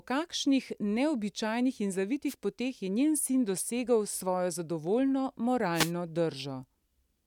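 Right after "kakšnih neobičajnih in", from 2.27 to 2.35 s, and again from 5.74 to 5.92 s, the speech is hit by a wireless microphone noise hit. The radio link fades, and receiver hiss surges as a brief swish. On a spectrogram each hit shows as a broadband vertical smear, and the waveform shows a noisy burst.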